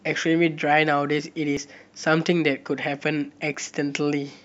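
At 1.57 s and again at 3.54 s, the speech skips forward abruptly. This is audio missing between chunks. A sliver of roughly 20 ms vanishes, and the two sides butt together. The repeat points to a likely 2-second processing chunk.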